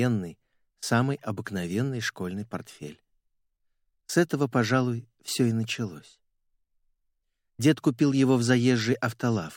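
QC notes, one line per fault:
No faults heard in this clip.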